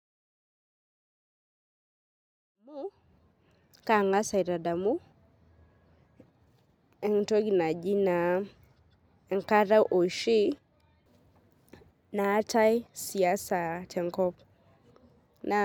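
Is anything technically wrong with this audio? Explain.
No, the speech signal has no technical faults, and the smooth fade-in that brings the level up from about two and a half seconds to full level at 3.66 s is a deliberate edit rather than a defect.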